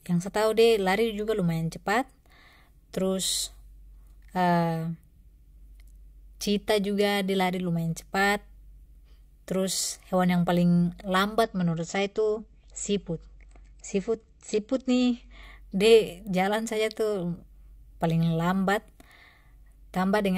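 Adaptive stream at a lower bitrate from 11.43 to 15.43 s in this speech clip, right after "yang paling": with no gap, the treble vanishes above 8 kHz and codec artefacts thicken, which fits a drop from 96 to 32 kbit/s AAC, before full quality returns at "de jalan saja tu".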